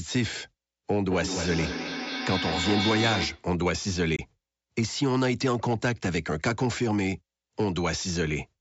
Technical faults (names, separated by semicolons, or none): feedback echo between two devices; Bluetooth dropout